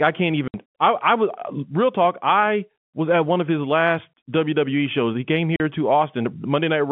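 At 0.48 s, between "I can't" and "I I was real", packets were lost and the receiver filled the gap with silence, leaving a 60 ms hole, which fits three 20 ms packets. A shorter 40 ms hole follows at 5.56 s. Both holes have hard edges in the narrow telephone-band G.711 speech.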